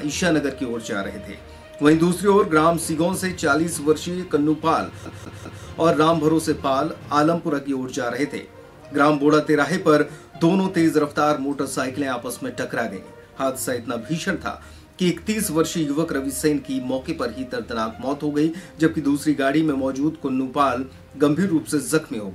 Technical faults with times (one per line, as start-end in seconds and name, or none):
5.05-5.65 CD stuck on one turn